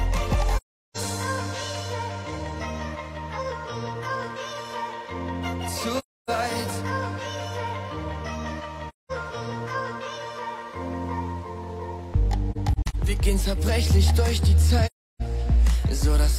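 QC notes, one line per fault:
0.56–0.98 s, 5.98–6.29 s, 8.88–9.12 s, 12.51–12.96 s, 14.86–15.22 s: AAC frame loss with muting. Lost frames are decoded as zeroed spectrum, leaving holes of about 0.38, 0.30, 0.21, 0.17 and 0.34 s. The 12.5 s hole is scattered short gaps, longest about 40 ms. Overlapping windows fade the sound out and in, so the edges are soft. On a spectrogram these appear as full-band blank columns with tapered edges, and on the waveform as smooth dips to silence.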